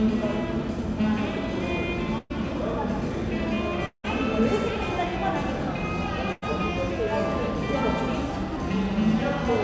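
A burst of packet loss at 2.18 to 2.32 s: about 120 ms of sound never arrived, so the last fragment is stretched and faded before the audio resumes further on.

At 3.86 to 4.06 s, the sound is held and fades, then gives way to about 90 ms of silence. About 180 ms is missing, likely from a long network dropout.

A second burst of packet loss at 6.32 to 6.44 s: about 100 ms is lost, briefly filled by a fading continuation, through a call path with nothing above 8 kHz.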